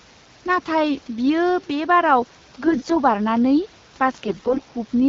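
At 2.64 to 2.97 s and 4.25 to 4.60 s, AMR bit errors strike. Flipped bits misplace the excitation pulses. The speech turns hoarse and gargly.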